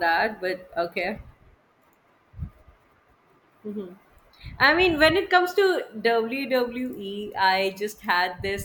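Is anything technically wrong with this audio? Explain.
No, no technical faults.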